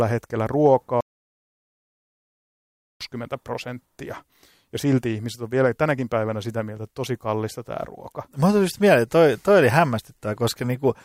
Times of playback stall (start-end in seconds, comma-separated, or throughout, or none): 1.01-3.01